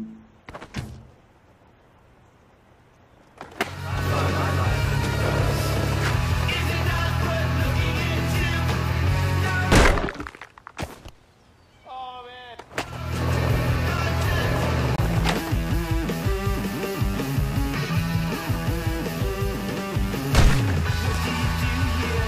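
Two blocks of digital silence interrupt the audio: a 5.8 ms dropout at 13.97 s, heard as a tick, and a 23 ms hole from 14.96 to 14.98 s. The output is cut abruptly to zero, from buffers not filled in time or invalid calculations, fitting 256- and 1024-sample blocks.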